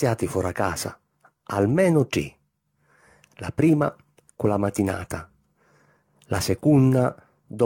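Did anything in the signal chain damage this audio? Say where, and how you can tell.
Yes. The damage sits at the codec stage and runs through the whole speech clip: it sounds swirly, smeared and hollow, with consonant attacks blurred and nothing above 18.2 kHz. That is generation loss, most likely from roughly ten lossy encode-decode passes, consistent with AAC-LC at around 96 kbit/s. Each pass requantises on a shifted frame grid, so the noise and spectral holes stack up well beyond what one encode at that rate would leave.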